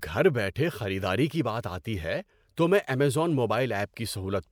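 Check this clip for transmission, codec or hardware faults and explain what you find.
Nothing to report: no transmission, codec or hardware fault is audible anywhere in the speech.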